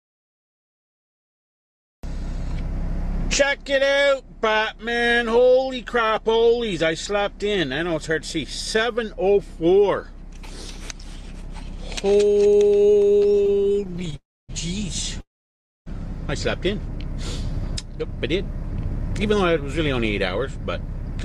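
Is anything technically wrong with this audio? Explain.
Yes. From 12.77 to 14.14 s there are repeated stalls (stutter): packets kept arriving late, so the jitter buffer emptied some 40 times, each gap no longer than 20 ms, and the receiver stretched the last sound to cover them. About 424 ms was filled this way, nearly a third of that stretch, so the audio drags and stutters without losing anything.

Two call audio freezes follow, at 14.16 to 14.51 s and at 15.21 to 15.88 s. Each was likely caused by packets held up in transit, leaving the buffer empty. The last sound carries on briefly and fades, then there is silence for 260 ms and 610 ms respectively, before the audio resumes where it stopped, later by 326 ms and 655 ms.

From 18.29 to 19.73 s a jitter buffer speed-up occurs. The buffer had built up more audio than it targets, so the receiver cut out many tiny pitch-period-length pieces, about a twentieth of a second in total. 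Playback runs at 103% speed with unchanged pitch.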